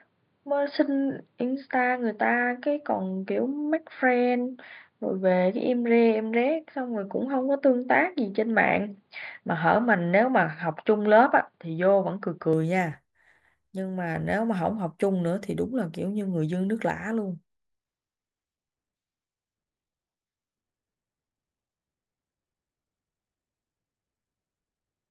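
From 0.0 to 12.53 s the speech sounds dull and boxy, with nothing above 4.9 kHz and a faint background noise some 45 dB under the signal; at 12.53 s it abruptly opens up. This is likely an input switched to a poorer device. A spectrogram shows a flat ceiling at 4.9 kHz that lifts at 12.53 s. The waveform shows no gap at the switch and no step in level.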